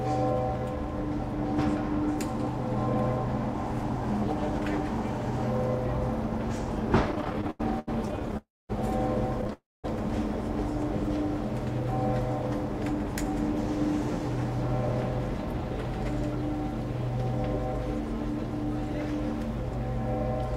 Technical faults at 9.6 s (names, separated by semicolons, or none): repeated stalls (stutter); call audio freeze